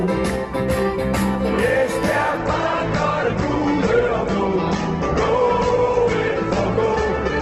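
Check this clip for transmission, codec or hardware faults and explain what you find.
One transmission fault stands out. From 2.37 s onward, an adaptive stream at a lower bitrate takes over. The slowed connection forces a leaner encode, so treble vanishes above 8.2 kHz and smeary artefacts rise. The sound fits a fall from about 64 to 12 kbit/s Opus. Unlike a dropout, the switch is abrupt but gapless.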